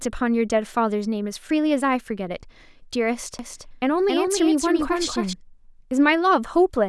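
From 3.39 to 5.33 s, the speech is joined by a second copy of itself trailing roughly 300 ms behind and somewhat quieter, dry and full-band, cutting in and out abruptly. This doubled audio track is likely from the signal being captured twice, once through a slower path.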